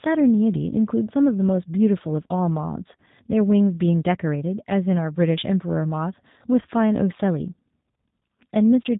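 Throughout the speech, the sound carries the signature of the G.729 codec, with artefacts plainly audible. The codec does not send the waveform itself. It sends a vocal tract filter, a pitch predictor and a few sparse pulses for each short frame, and the decoder rebuilds the speech from those. Everything above about 3.8 kHz is missing, giving a narrow, boxed-in tone. The reconstruction sounds slightly rough and synthetic, which fits an 8 kbit/s stream.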